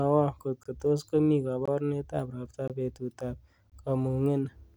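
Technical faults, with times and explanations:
0.63–0.66, 1.66–1.68, 2.68–2.70 and 3.70–3.72 s: gap between chunks. The speech arrives in one-second pieces with about 21 ms of silence wedged in at each join, so you get short, hard-edged holes at a steady rhythm. Nothing is lost; everything after each hole just runs slightly later.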